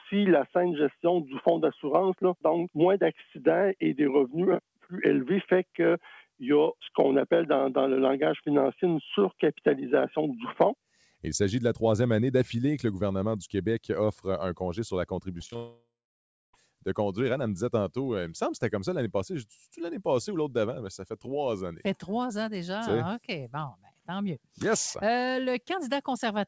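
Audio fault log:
3.19–3.36 s and 23.72–24.08 s, sound cut by the noise suppressor: the suppressor mistook sound for noise and pulled it down, by about 10 dB in the first and about 12 dB in the second. Sustained and decaying parts sink or end abruptly, each for roughly 150–200 ms.
15.38–15.55 s, repeated packet loss (robotic sound): several short holes in quick succession, the longest 18 ms. Each is patched by stretching the preceding sound, so over a third of this span is filler, giving a choppy texture with pieces missing.
15.56–16.54 s, long network dropout: the sound turns into a stretched, fading buzz or hiss, then about 0.64 s of silence before audio resumes at 16.54 s with the intervening material gone. The likely cause is no packets arriving, with the receiver concealing until it gives up.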